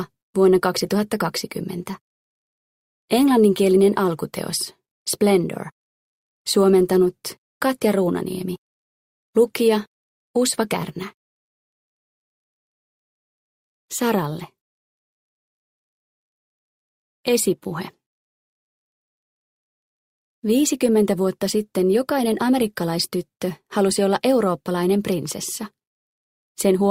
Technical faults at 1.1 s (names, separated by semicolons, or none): none